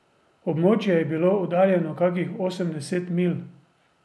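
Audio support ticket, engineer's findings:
No audible defects found in the speech signal; level, continuity and timing hold steady with nothing to trace to any component.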